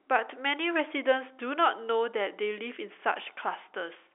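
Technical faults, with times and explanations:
Nothing stood out on listening to this telephone-band speech, which carries G.711 telephone coding with its content capped at about 3.8 kHz.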